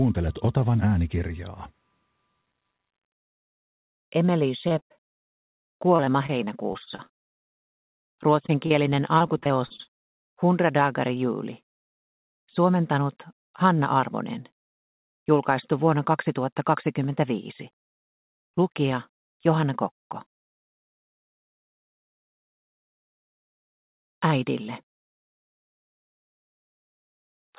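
Audio carried over a call link, band-limited with nothing above 4 kHz in a way that fits G.711 mu-law at 64 kbps, shows repeated packet loss (robotic sound) from 4.68 to 8.03 s, 9.18 to 9.89 s and 26.00 to 27.54 s. Holes of up to 118 ms keep arriving, and the receiver patches each one by extending the last sound, giving a choppy texture with pieces missing. On a spectrogram these stretches show smeared, repeated harmonic bands and abrupt seams. The waveform shows looping, too-regular cycles where material is missing. Short concealed packet loss also appears at 8.46–8.50 s, 8.66–8.72 s and 10.31–10.34 s. Each is a single gap of 20 to 40 ms, filled from the preceding pitch or with shaped noise and then blended back. It is heard as a brief smear or wobble. On the spectrogram it shows as a thin, blurred vertical slice, and on the waveform as a short, overly periodic or noise-like segment with a soft crossfade at each edge.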